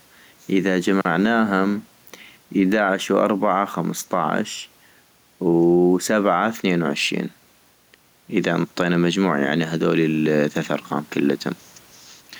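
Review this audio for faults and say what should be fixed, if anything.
Gain pumping runs throughout the speech, with a gain swing of roughly 5 dB that leaves loud and quiet passages squashed close together; the room noise sits about 40 dB below the voice. The likely cause is input gain set far too high, with a fast limiter or compressor clamping down on every loud syllable and releasing in the gaps. Lower the input gain and disable or gentle the automatic limiting so the level no longer rides on each syllable.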